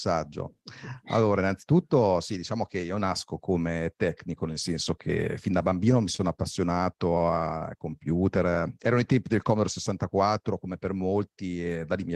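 Speech, with three short stalls from a late packet at 6.16–6.21 s, 7.18–7.22 s and 7.58–7.75 s. Each time the jitter buffer ran dry and the receiver held the last sound for about 23–25 ms, giving a brief drawn-out buzz with nothing lost. In the third stall, 12 ms was then trimmed. From 9.35 to 9.93 s a jitter buffer speed-up removes about 50 ms of pitch periods to cut excess delay, so the speech runs at 106% speed and sounds hurried at unchanged pitch.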